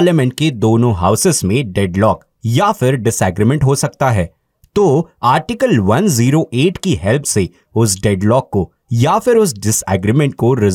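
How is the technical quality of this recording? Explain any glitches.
No technical faults can be heard anywhere in this speech recording, so there are no glitches to explain.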